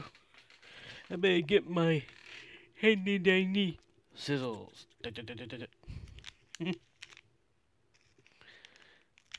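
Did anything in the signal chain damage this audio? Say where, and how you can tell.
No, no signal-chain damage heard.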